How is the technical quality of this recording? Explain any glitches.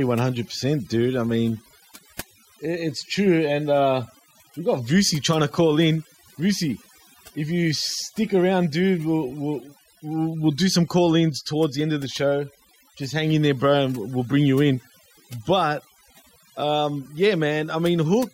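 Overdone noise removal runs throughout this speech recording. Aggressive noise suppression shuts off frequency bands near the noise estimate, leaving a lowered background that breaks up into twinkling specks.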